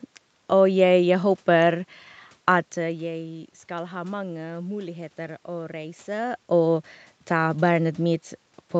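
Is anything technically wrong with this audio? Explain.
No, nothing's technically wrong here; the level dips and swells around 2.5 s and again near 6 s are just the talker shifting relative to the microphone, and the background noise is simply the room.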